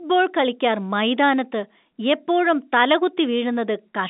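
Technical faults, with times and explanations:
No technical faults can be heard in this clip.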